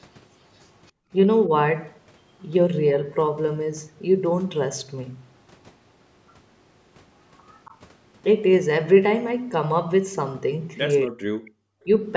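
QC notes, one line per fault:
0.87–0.91 s, 7.53–7.74 s, 11.45–11.51 s: echo leak. A faint copy of the voice returns 275 ms late, very quiet at first, about 10 dB louder later. Likely caused by a loudspeaker echo the far-end canceller missed.
0.92–1.11 s: background gated by the echo canceller. Room sound drops by about 40 dB for roughly 200 ms, then returns. The canceller clamped the microphone while the loudspeaker played.
11.08–11.36 s: speech suppressed in double talk. The talker's voice dips by roughly 40 dB for about 0.3 s. Likely the canceller confused overlapping speech with echo and suppressed both.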